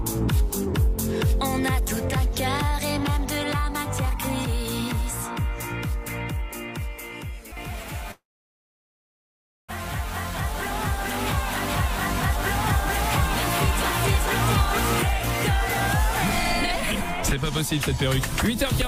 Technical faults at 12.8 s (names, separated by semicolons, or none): doubled audio track